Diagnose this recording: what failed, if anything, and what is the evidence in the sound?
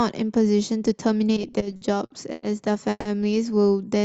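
Repeated stalls (stutter) at the network and jitter-buffer stage, from 1.35 s to 2.44 s. The sound catches and drags ten times in that stretch, with short held, smeared fragments where the receiver extended the last audio. The fills total 270 ms, the longest about 100 ms, covering roughly a quarter of the span. No audio is lost; packets arrived late or too slowly, and the buffer kept running dry and stretching time.

A call audio freeze occurs at 2.90 s, ending at 3.07 s. The last sound is held as a fading buzz for 150 ms, with about 30 ms of silence at the end, then the audio resumes where it stopped with nothing missing. The cause is likely a packet delay jump of about 150 ms on the network, emptying the jitter buffer. The fill carries the Opus call path's roughly 8 kHz band limit.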